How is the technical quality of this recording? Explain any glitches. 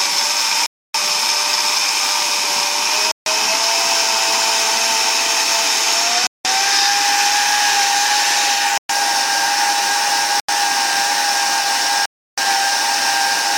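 The recording is marred by six brief gaps where the audio drops to silence and then resumes abruptly, at 0.66 to 0.94 s, 3.11 to 3.26 s, 6.27 to 6.45 s, 8.78 to 8.89 s, 10.40 to 10.49 s and 12.06 to 12.38 s, lasting between 0.09 and 0.32 s. These are likely Bluetooth stalls: radio interference delays packets, the receiver's buffer runs empty, and playback pauses until retransmissions arrive. Unlike a digital click or codec warble, each gap is clean, total silence with no smeared or garbled sound around it.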